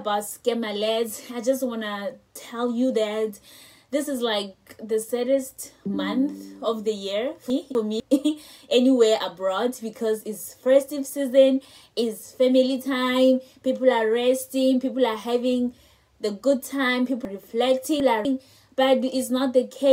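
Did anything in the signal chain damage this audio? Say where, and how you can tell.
Yes. Chunks out of order at 7.5 to 8.0 s and 17.25 to 18.25 s: a 250 ms block plays one chunk late, then three chunks late, jumbling the sound at the buffer or packet-reordering stage. Waveform joins step abruptly at each seam.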